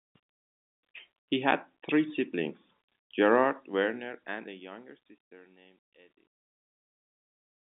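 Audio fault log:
No faults detected; the speech carries narrowband telephone audio with nothing above about 3.8 kHz and ends on a smooth, deliberate fade-out.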